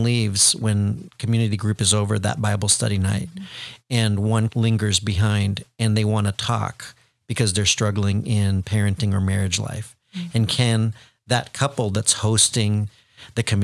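The speech was resampled to a lower rate without an anti-aliasing filter, which fits a drop from 48 kHz to 24 kHz, and it has aliasing throughout. Content above the 12 kHz fold point reflects back down as unrelated frequencies, sitting around 30 dB below the speech. The result is gritty, metallic sibilants and spectral energy that runs hard up to the 12 kHz band edge instead of rolling off.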